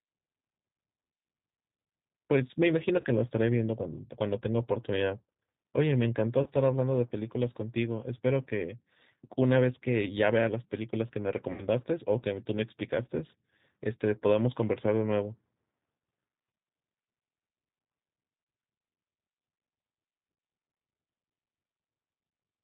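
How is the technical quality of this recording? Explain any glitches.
The recording has plainly audible low-bitrate codec damage throughout, plus four short dropouts where lost data was filled in.

G.729 codec: across the whole clip the speech sounds slightly rough and synthetic, with nothing above 4 kHz. The decoder rebuilds the voice from a filter model, a pitch predictor and a few pulses per frame, which fits an 8 kbit/s G.729A stream.

VoIP packet loss concealed by the speech codec: at 3.01 to 3.05 s, 6.43 to 6.49 s, 11.52 to 11.62 s and 18.44 to 18.47 s, the decoder extrapolated from its last pitch and filter with falling gain, stretching the speech into a buzzy tone or coloured noise that fades. The gaps run about 30 ms, except the 60 ms one at 11.5 s, which fits two lost packets.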